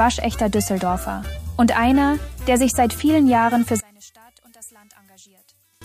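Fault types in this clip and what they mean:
one channel inverted: from 3.80 s to 5.82 s the sound collapses to a faint residue, dropping by about 28 dB, while the first part of the clip holds its normal level. The likely cause is one stereo channel with reversed polarity. When the two channels are summed to mono, the content they share cancels, so centred material and low end nearly disappear. Only the small difference between the channels remains audible.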